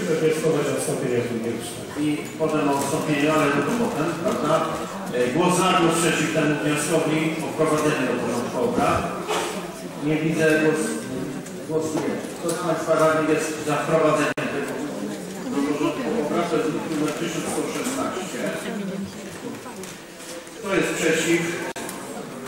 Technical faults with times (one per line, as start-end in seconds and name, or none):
14.32-14.38 gap at a join of encoded pieces
21.72-21.76 gap at a join of encoded pieces